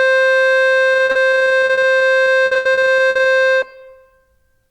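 From 0.93 to 3.27 s the music suffers repeated packet loss, with robotic sound: frequent holes up to 80 ms are patched by extending prior audio, leaving choppy playback with pieces missing.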